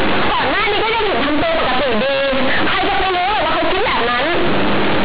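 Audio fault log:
Throughout, companded audio read as linear: the speech comes out extremely loud and harshly buzzy, with quiet passages blown up to nearly the size of loud ones and a dense hiss filling every pause. The mu-law bytes are being played as plain linear 8-bit samples without expansion, so each sign change throws the waveform across roughly half the output range and the logarithmic scale badly misshapes it. Beneath this, the 8 kHz telephone coding itself is intact.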